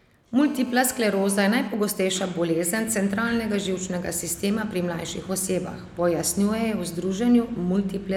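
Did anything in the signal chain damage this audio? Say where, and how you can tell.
Yes: GSM phone buzz from 0.41 s to 1.68 s, picked up in the analogue wiring. A hard, raspy 217 Hz buzz with dense harmonics sits about 19 dB below the speech, steady throughout, as a phone in a call bursts its transmitter and the audio circuitry rectifies those radio pulses.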